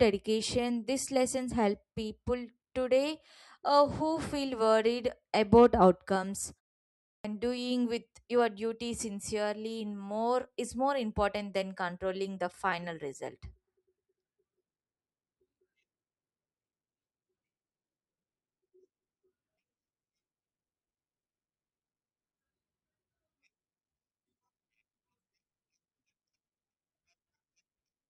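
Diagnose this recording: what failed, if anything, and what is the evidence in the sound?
A clipped start after a pause points to the playback stage. After "feel worried about outcomes" and a 0.54 s pause, about 185 ms is lost from 7.06 to 7.25 s, so "doing with your duty" bursts in abruptly. The output device slept and needed time to wake again. Unlike muted pauses, which only silence the gap, this swallows the start of the speech.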